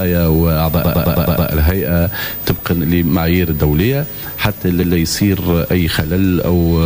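The audio stutters twice: from 0.83 s to 1.47 s a short 106.7 ms fragment loops six extra times, and at 4.82 to 4.95 s a 128 ms fragment plays once more before the sound moves on. This is repeated frames. A run of compressed frames, which in each case fits a block of about five or six frames, was written or delivered more than once, so the decoder replayed it. The repeats lengthen the clip by 640 ms and 128 ms respectively.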